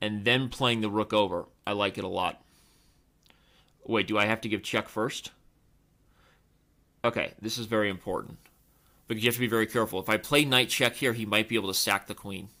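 From 7.90 s to the end, pre-emphasis is left on: the treble lift of a 50 µs FM curve was applied but its matching de-emphasis never was, so high frequencies stand about 10 dB above 1 kHz by 10 kHz. The sound turns thin, bright and sibilant. Unlike a high-pass filter, the low end is still present. The boost rises steadily from around 3.2 kHz upward, following that fixed curve rather than a narrow presence peak.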